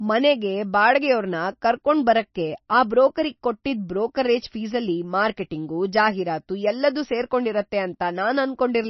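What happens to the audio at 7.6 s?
MP3 compression artefacts are present at 7.6 s, as they are throughout the speech. Nothing is left above 5.9 kHz, and weak frequency lines flicker on and off between frames, giving a watery, swirly sound with smeared attacks. The likely cause is a heavily starved MP3 encoder at a bitrate of around 26 kbps.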